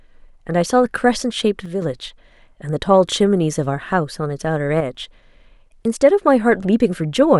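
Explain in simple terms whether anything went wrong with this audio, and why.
One side of the stereo signal likely dropped out twice, from 1.66 to 1.82 s and from 4.81 to 4.95 s. This one channel dropping out makes the speech suddenly sound quieter for a split second each time, then snap back.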